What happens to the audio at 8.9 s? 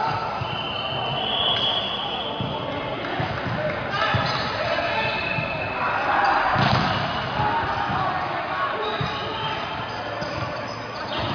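Nothing goes wrong at 8.9 s; the audio plays through that moment intact, with no dropout, click, distortion or other fault.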